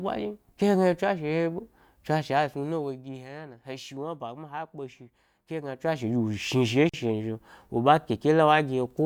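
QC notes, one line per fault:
2.28 to 3.28 s and 5.6 to 6.08 s, zipper noise: the level drops by about 15 dB in the first stretch and comes back up about the same in the second, but in 1 dB jumps rather than a glide, at roughly 30 a second. Each jump is a tiny discontinuity in the waveform, so you get a fine ticking riding on the speech for as long as the level's moving.
6.89 s, gap at a join of encoded pieces: a 43.5 ms gap drops into the speech, with its edges smeared by the codec so the truly silent part is shorter. Looks like two separately encoded pieces were butted together without trimming the encoder's start delay and end padding. The leftover silence stays in, and the speech picks up exactly where it left off.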